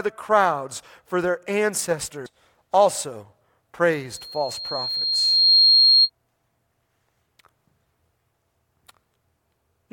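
At 2.26 s a brief blip cuts through the speech. Damaged data in the compressed stream throws the decoder off, and it loses sync before recovering. From 4.10 to 6.10 s a loudspeaker feedback squeal rises at 4.2 kHz. It swells over roughly one and a half seconds, reaching about 10 dB above the speech.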